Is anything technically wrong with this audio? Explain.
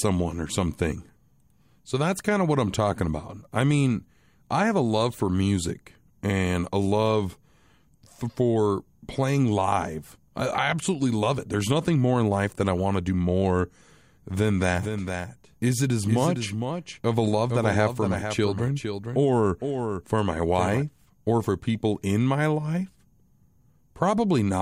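Yes. From 14.72 to 20.82 s there is a doubled audio track: a full-band copy of the speech trails about half a second behind, roughly 5 dB quieter, likely from a second, slower capture path. Unlike an echo, it has no decay or room colour and cuts in and out abruptly.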